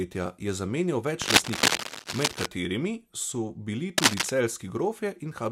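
From 1.22 s to 2.46 s, right after "je zamenjal", dense, uneven bursts of crackle and rustle sit over the speech, a little louder than it. A second, shorter burst follows from 3.98 s to 4.30 s. This is cable scratch noise, likely from a worn cable, connector or control being moved so that its contact resistance jumps rapidly. It comes across as scratching on top of the speech.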